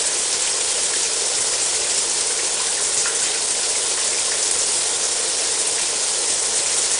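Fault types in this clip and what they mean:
4-bit ADPCM compression: each sample was coded as a coarse 4-bit step from a running prediction, so a gritty hiss rides on every loud moment and tracks its level, while nothing above 10.6 kHz survives, which fits a stream near 89 kbps.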